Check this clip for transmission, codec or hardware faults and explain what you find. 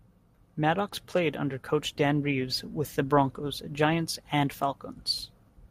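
Nothing stood out on listening to this speech recording.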